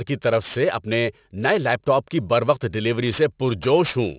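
Aliasing runs throughout: energy above 4 kHz folds back as gritty, metallic sibilance, fitting an unfiltered drop to 8 kHz, unlike the dullness of band-limiting.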